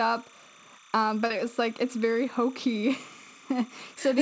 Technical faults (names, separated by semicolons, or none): timecode bleed; short concealed packet loss